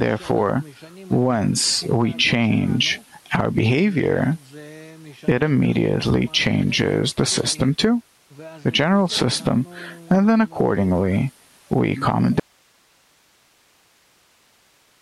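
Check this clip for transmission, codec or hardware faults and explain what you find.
One fault is present. From 12.40 s to the end there is an audio dropout to a faint residue. The wanted signal was likely lost upstream while the path after the break stayed live. The sound cuts off abruptly, leaving only hiss roughly 40 dB below the earlier level.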